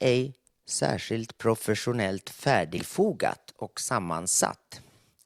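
Right after "särskilt professionellt", at about 2.77 s, compressed frames are skipped: roughly three 20 ms frames go missing, so the speech jumps ahead about 70 ms.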